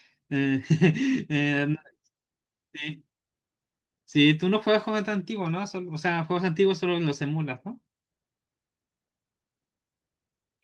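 Nothing stood out on listening to this speech, which comes through a call path consistent with Opus at a bitrate of 32 kbps and an upper limit of around 12 kHz.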